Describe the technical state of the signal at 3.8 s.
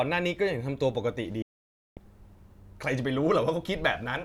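At 3.8 s the speech signal is intact, with no audible fault at that moment.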